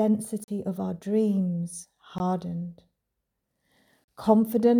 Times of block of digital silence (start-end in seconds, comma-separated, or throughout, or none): 0.44-0.48, 2.18, 4.04-4.08